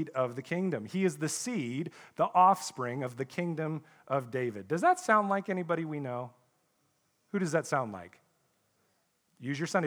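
No technical faults turn up anywhere in the speech. There is no moment in it that calls for a timestamp or an explanation.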